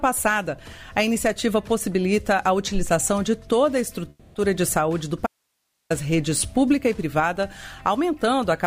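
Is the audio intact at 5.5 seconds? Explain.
No. An audio dropout to a faint residue runs from 5.27 to 5.90 s, about 0.64 s. The sound cuts off abruptly, leaving only hiss about 50 dB below the signal. The signal was likely lost while the path after the break stayed live.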